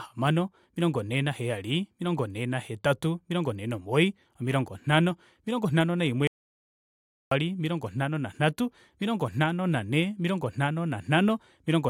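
Right after "omilongo nhano omilongo nhano", at 6.27 s, the speech cuts out completely and doesn't return until 7.31 s, where it picks up with "omilongo nhano nanhatu". That's an audio dropout to silence, about 1.04 s long. The gap is dead quiet, with no room tone at all, and whatever was said in between is simply gone. The likely cause is the input dropping out briefly, say a loose connection, a link failure or an accidental mute, while recording carried on writing silence.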